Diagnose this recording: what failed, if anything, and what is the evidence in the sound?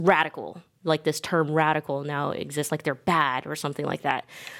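Nothing in the chain has failed: the speech signal reaches playback intact, with its timing and continuity undisturbed at every stage.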